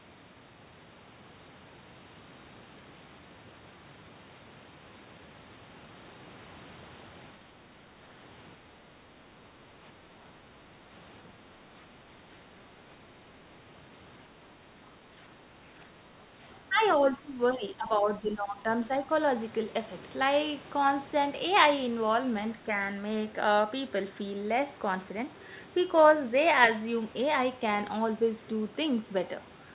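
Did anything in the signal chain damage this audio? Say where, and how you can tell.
Yes. The speech dips by about 10 dB at 15.39–15.86 s and 16.69–16.83 s, then by up to about 15 dB from 17.0 to 18.67 s. This is likely speech suppressed in double talk: the call's echo canceller mistook overlapping talk for echo and turned it down.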